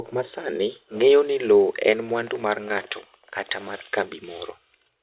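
Speech, with nothing technically wrong to report. No part of the recording calls for a fix or an explanation.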